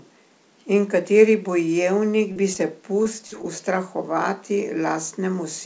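Short concealed packet loss at 2.32 to 2.38 s, 2.54 to 2.57 s and 3.03 to 3.07 s: brief stretches of the speech arrived too late, so the receiver extended the preceding sound and blended back, leaving small smears or wobbles of about 12 to 38 ms. A burst of packet loss at 3.27 to 3.34 s follows, where about 40 ms went missing and the gap was bridged by a fading continuation lasting roughly 47 ms. This sounds like a held buzz or dying hiss before the audio resumes further on. One more short concealed packet loss at 3.42 to 3.45 s adds a quick smear, heard through a call path whose band stops at 8 kHz.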